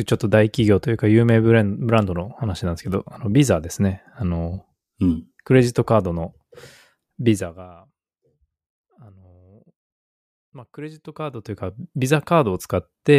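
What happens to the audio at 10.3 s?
Nothing goes wrong at 10.3 s: the speech carries on intact there, with no dropout, glitch or unwanted level jump.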